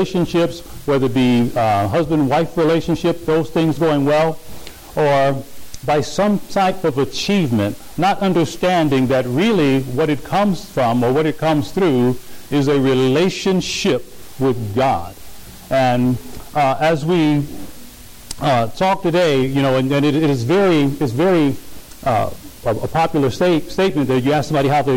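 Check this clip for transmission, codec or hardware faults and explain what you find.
Hard clipping runs throughout. The signal is driven about 12 dB past what a stage can pass, so roughly a sixth of samples hit the ceiling. The peaks are sheared flat, which shows as squared-off tops on the waveform and as harmonic smear rising up the spectrogram. It is heard as harsh fuzz on every loud moment.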